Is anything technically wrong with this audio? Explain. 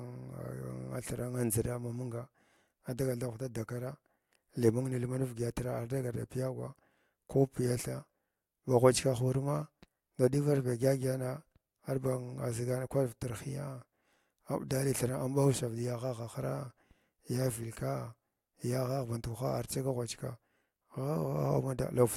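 Yes, one fault. At 5.05 s, just after "li mung", there is a single sharp click. It is likely dropped samples: a handful vanish, well under a millisecond, so the waveform jumps abruptly.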